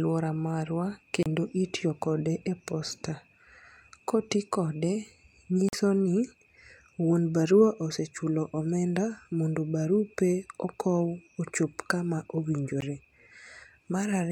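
At 1.23 to 1.26 s, just before "itiyo kode e posta", the speech drops to silence for 29 ms, then again for 44 ms at 5.69 to 5.73 s, and for about 15 ms at 12.81 s. The lengths fit two, three and one lost packets, so this is likely a Bluetooth dropout. Unlike a buffer underrun, which stalls and then continues late, the speech comes back further along, as if it had kept playing through the hole.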